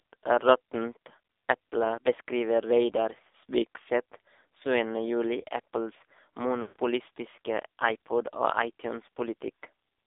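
From start to finish the speech sounds thin, boxed-in and buzzy, with a heavily synthetic edge. This is the AMR narrowband mobile codec. Only roughly 300 Hz to 3.7 kHz gets through, and the coder rebuilds the voice from a vocal-tract model fed by sparse pulses. The damage is heavy, which points to one of the lowest AMR-NB modes, around 5.9 kbps.

From 6.62 to 6.76 s, about 140 ms, the voice smears into a drawn-out, warbling tone that sags toward silence before normal speech resumes, briefly rough. These are lost AMR speech frames. After radio errors, the decoder kept replaying the last good pitch and vocal-tract settings at falling gain, consistent with a run of seven 20 ms frames.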